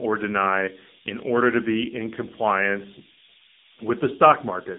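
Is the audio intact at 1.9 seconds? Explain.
No. At 1.9 seconds the speech carries low bit depth with noise shaping throughout. Five-bit rounding error pushed upward makes a steady, thin hiss roughly as loud as the voice.

The AMR narrowband mobile codec also runs throughout. Its pulse-driven vocal-tract model sounds buzzy and synthetic, fitting roughly 8 kbps, and nothing passes above 3.8 kHz.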